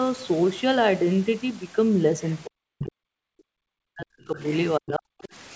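Speech from a call, band-limited to 8 kHz as the G.722 path would suggest, with the far end bleeding in. The other side's voice leaks through in short scraps at 2.23–2.4 s, 2.79–2.84 s, 4.39–4.57 s and 5.22–5.29 s, mostly quiet but the 2.79 s one only about 10 dB under the talker, likely residual loudspeaker echo the canceller missed. Then the near voice gets suppressed in double talk from 2.46 to 4.4 s and again 4.78–5.1 s, dipping as far as about 40 dB while both sides overlap, likely the echo canceller ducking everything when it couldn't tell them apart.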